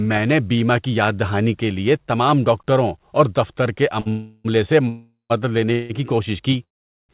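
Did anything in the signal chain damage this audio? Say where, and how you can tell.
Yes, at the network and jitter-buffer stage of the call. Right after "ڈاکٹروں اور دفتر کے", a short stall from a late packet at 4.00 to 4.08 s holds the last sound for about 56 ms with a slight buzz or dip. It is too brief to fade, which sets it apart from a freeze.

A call audio freeze follows at 4.10 to 4.46 s, 4.88 to 5.32 s, 5.72 to 5.92 s (just before "کی کوشش") and 6.64 to 7.11 s. Each is a buzz or hiss that fades, reaching silence for about 140 ms and 440 ms in the second and last. The likely cause is delayed packets emptying the buffer. Speech resumes intact, so these are inserted gaps, not dropouts.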